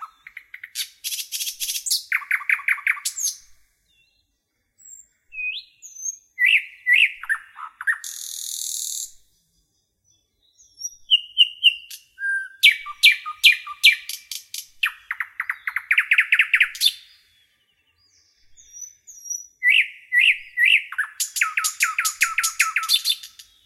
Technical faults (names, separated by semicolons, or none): doubled audio track